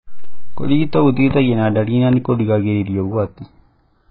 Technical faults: channels drifting apart; AAC compression; loud pop

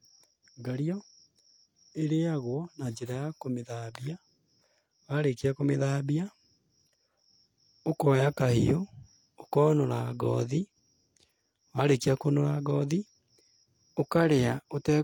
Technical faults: low-bitrate audio saved at a high bitrate

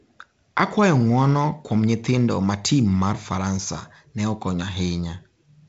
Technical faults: none

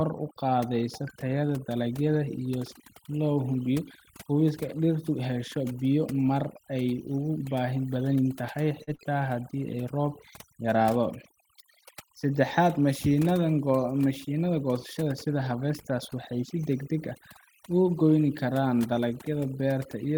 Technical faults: overdone noise removal; short concealed packet loss

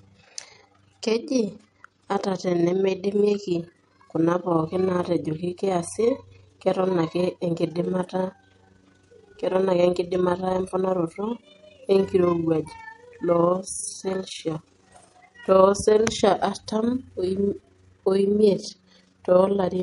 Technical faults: overlap-add ripple; MP3 compression

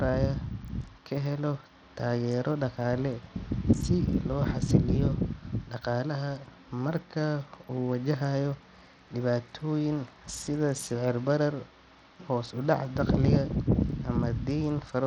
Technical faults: Bluetooth SBC compression

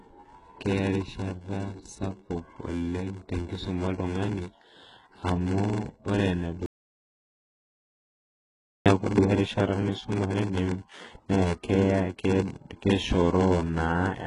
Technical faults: block size mismatch (padded); HE-AAC compression; audio dropout to silence

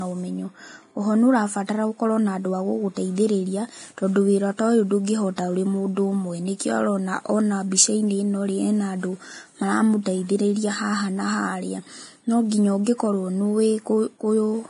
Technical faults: low-bitrate audio saved at a high bitrate

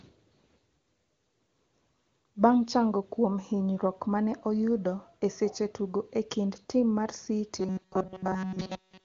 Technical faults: robotic sound from repeated short buffers

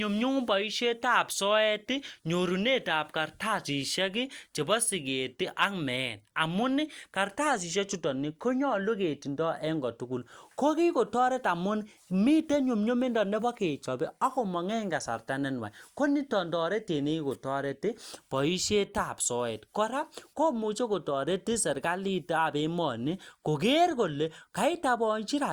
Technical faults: none

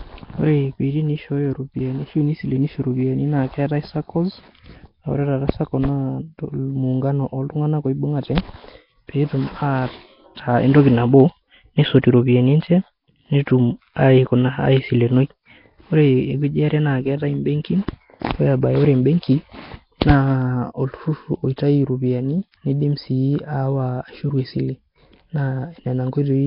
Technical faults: Nellymoser compression

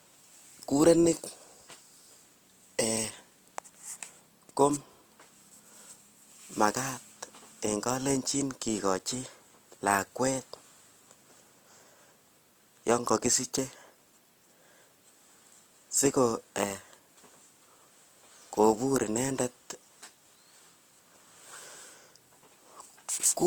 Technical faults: Opus compression

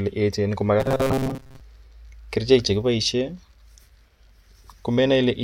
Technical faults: robotic sound from repeated short buffers

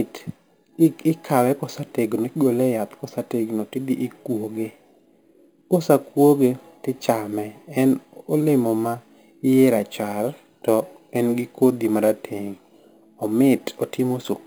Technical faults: imaging from sample-and-hold upsampling

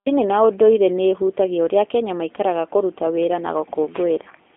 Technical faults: G.729 codec

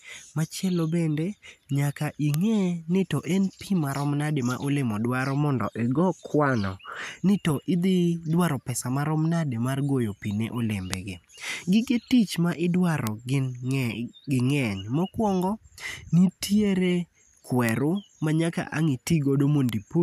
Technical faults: bit error spike

